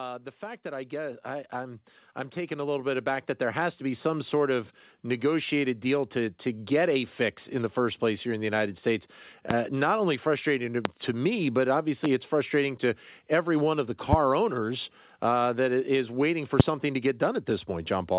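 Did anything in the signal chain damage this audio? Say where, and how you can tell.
Yes. In the call processing stage, automatic gain rising runs from 0.39 s to 6.76 s. The speech and the room noise beneath it swell together by about 12 dB over those six seconds. That shared rise is what separates it from someone simply speaking louder or moving closer to the microphone, which would lift the voice but not the background. The gain control judged the input too quiet and kept raising its gain until the level settled.

The second fault is a loud pop, heard five times as single sharp clicks at 9.51 s, 10.85 s, 12.05 s, 14.13 s and 16.60 s, each about 30 ms long. They stand out from the speech by very roughly 15 to 25 dB, and the speech continues unbroken underneath. That rules out dropouts or packet loss, which would leave gaps. The likely source is the analogue wiring or connection, such as a loose plug or a static discharge. 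All of this sits inside a call band that stops at 4 kHz, which fits G.711 mu-law at 64 kbps.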